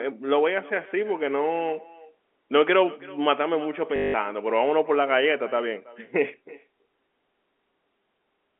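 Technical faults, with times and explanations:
Throughout, echo with no canceller: a quieter, thinner copy of the speech returns roughly a third of a second later, about 22 dB down. The far loudspeaker feeds its microphone, and nothing removes it.
3.96 to 4.14 s, packet loss with last packet repeated: 180 ms of audio is lost. The last packet replays, giving a buzzing robotic stutter that fits 20 ms packets.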